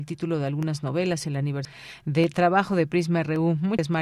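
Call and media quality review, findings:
Damaged data in a compressed stream, two events. First at 1.65 s, just after "de algunas novelas el": brief disruption. Second from 3.79 to 3.88 s, about 90 ms. Probable component: the encoded speech stream ahead of the decoder. Mechanism: corrupted frame bytes make the decoder misread or reject those frames. Sync is lost. The decoder then searches for the next valid frame header.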